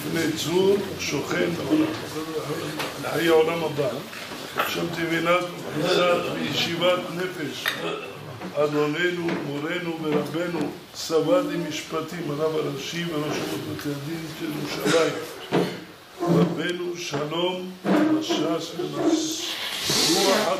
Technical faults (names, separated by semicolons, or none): none